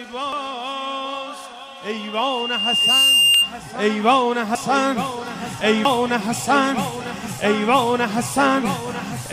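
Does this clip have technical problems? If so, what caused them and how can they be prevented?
Yes. Dropped buffers (overruns) at 0.33, 3.34, 4.55 and 5.85 s: each is a jump with the sound skipping ahead, losing a few tens of milliseconds up to around a tenth of a second. The likely cause is the recording program failing to read its input before the hardware overwrote it. Larger buffers and a less loaded system prevent this.

Loudspeaker feedback squeal from 1.92 to 3.55 s: a 2.8 kHz tone swells over about a second to roughly 10 dB above the signal, because the microphone hears its own loudspeaker and the loop gain exceeds one at that frequency. Lower monitor gain, repositioning, or a notch filter prevents it.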